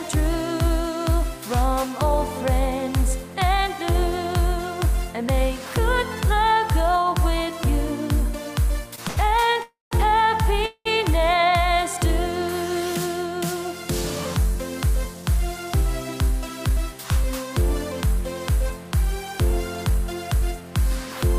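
At 8.95 s, 9.08 to 9.18 s and 9.52 s, short stalls from late packets hold the sound for 25, 86 and 25 ms as the jitter buffer runs empty and the last sound is stretched. From 9.63 to 9.93 s and 10.66 to 10.87 s, call audio freezes, likely from delayed packets, extend the sound into a fading buzz or hiss, then silence for 160 and 50 ms. From 14.55 to 20.62 s, a jitter buffer speed-up trims pitch periods, running about 3% fast at unchanged pitch and removing around 0.15 s.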